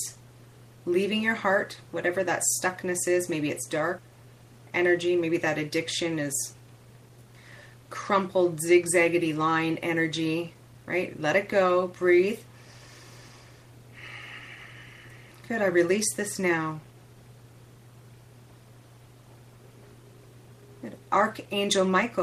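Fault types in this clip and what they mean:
Jitter buffer speed-up: from 6.03 to 7.27 s the receiver, holding excess buffered audio, cut repeated pitch-period-sized pieces, so the sound plays 8% fast at the same pitch, losing about 0.1 s. Spectrograms show unchanged harmonic spacing but compressed timing; waveforms show tiny splices.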